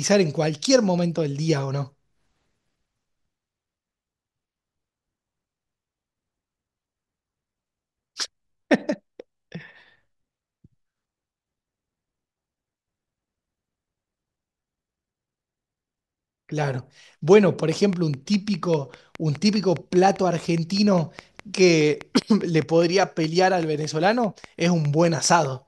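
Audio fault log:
17.72–25.46 s, train of clicks: near-identical pulses tick at a steady 4.9 per second, some forty in all, peaking a little above the speech and continuing through pauses. Their even pacing and matching shape set them apart from random crackle. Likely interference from nearby equipment.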